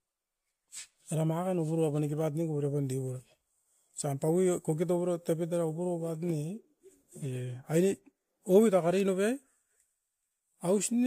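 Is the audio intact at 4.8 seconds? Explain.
Yes, at 4.8 seconds the speech runs intact, with no dropout, click, distortion or other break to be heard.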